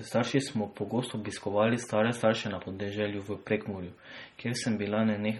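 From start to finish, the speech carries heavy MP3 compression artefacts, likely from a low bitrate around 32 kbps. Nothing sounds above 16.6 kHz. Weak frequency lines flicker on and off between frames. The sound turns watery and swirly, s sounds chirp metallically, and attacks smear.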